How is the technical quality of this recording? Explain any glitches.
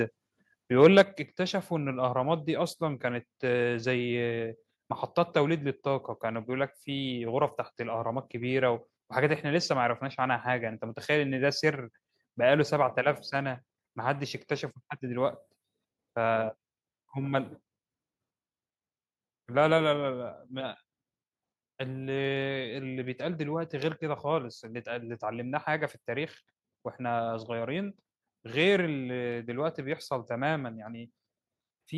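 Two faults sit right at the start. The rest of the clip isn't assessed here.

From 0.81 to 1.02 s the loudest speech turns harsh and crackly, likely microphone overload: peaks driven about 4 dB past the converter's ceiling, flattening a few percent of samples.

At 1.02 s the speech and background suddenly drop by 6 dB together, likely the microphone volume stepped down, as software cut the input gain after that clipped peak.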